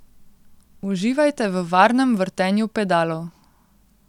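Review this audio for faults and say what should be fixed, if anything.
Nothing in this speech recording needs fixing, because no technical fault can be heard at any point. With no fault present, there is nothing to trace and no preventive change is called for.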